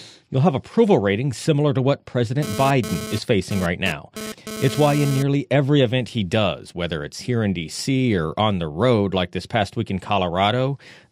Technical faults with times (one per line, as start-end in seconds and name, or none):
2.42-5.23 GSM phone buzz